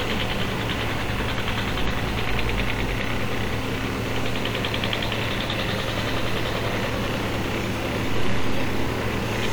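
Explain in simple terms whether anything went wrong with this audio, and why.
Yes, the whole clip sounds grainy and gritty, worst in quiet moments, likely low bit depth without dither, which fits roughly 6 bits rounded off.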